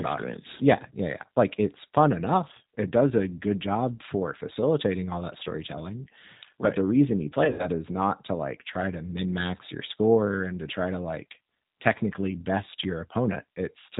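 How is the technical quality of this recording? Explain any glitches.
The recording has two audible faults: plainly audible low-bitrate voice-codec coloring throughout, and one concealed dropout partway through.

For the whole clip, the speech carries plainly audible G.729 codec damage. The decoder rebuilds each short frame from a vocal-tract filter, a pitch predictor and a handful of pulses, which fits an 8 kbit/s G.729A stream. That leaves the speech clear but slightly rough and synthetic. On a spectrogram, all energy stops at a hard ceiling near 4 kHz, and harmonics look smeared rather than crisp.

From 7.45 to 7.68 s, between "right the reason you" and "is not to like", there is VoIP packet loss concealed by the speech codec. About 110 ms of audio went missing across 140 ms, with the longest gap about 80 ms. The decoder filled the gaps by repeating its last pitch and filter at falling gain. 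The result is a stretched, buzzy tone or coloured noise that fades, and the speech sounds weak or distorted as it resumes. On the waveform, this shows as a stretch that decays. On the spectrogram, it shows as flat, frozen bands.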